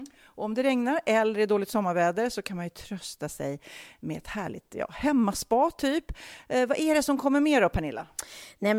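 No technical faults can be heard anywhere in the speech.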